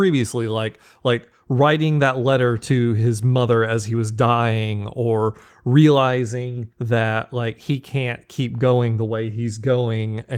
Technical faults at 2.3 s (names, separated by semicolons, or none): none